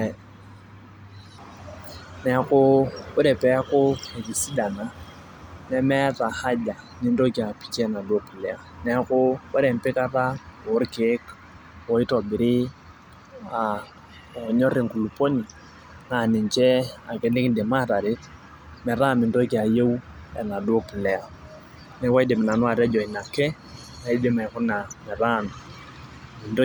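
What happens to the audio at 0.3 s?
Nothing goes wrong at 0.3 s; the speech plays through that moment intact, with no dropout, click or distortion.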